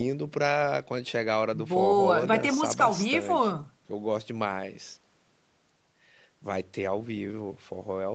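No faults in the speech; top end stops at about 8 kHz, consistent with a wideband Opus call path and normal call microphone processing.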